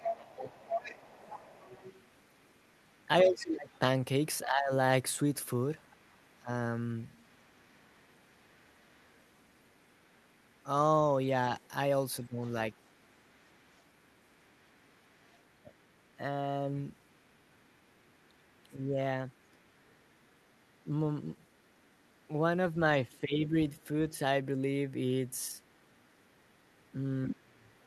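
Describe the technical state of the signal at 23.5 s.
At 23.5 s you're right at the tail of a short bout of speech suppressed in double talk, running from 23.09 to 23.55 s. The talker's level sags by around 10 dB over roughly two thirds of that stretch, which is likely the echo canceller ducking everything while both sides were talking at once.

Underneath that, and across the whole clip, there's the other side's voice leaking through at a very low level, sitting far below the talker. That's probably loudspeaker sound the canceller never fully scrubbed out of the mic feed.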